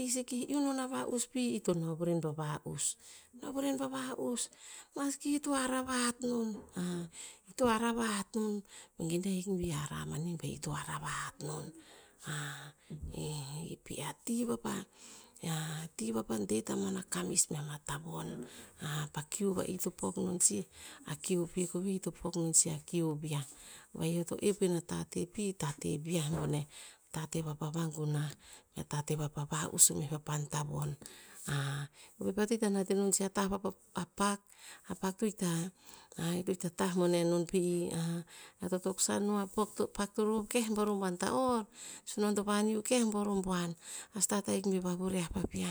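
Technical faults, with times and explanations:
No technical faults can be heard in this speech recording.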